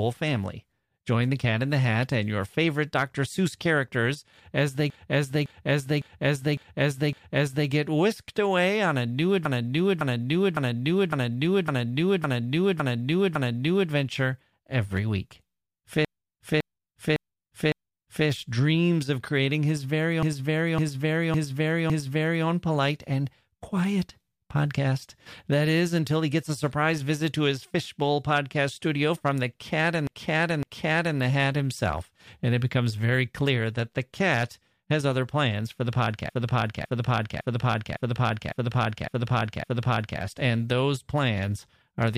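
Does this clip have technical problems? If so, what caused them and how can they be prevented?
Yes: repeated frames. The same 0.56 s block replays back-to-back at 4.90–7.69, 9.45–13.91, 16.05–18.28, 20.23–22.46, 30.07–31.19 and 36.30–40.20 s, each an identical copy of a run of compressed frames that lengthens the audio. Unlike echo, nothing decays or overlaps. Checking frame sequence numbers and dropping duplicates before decoding prevents it.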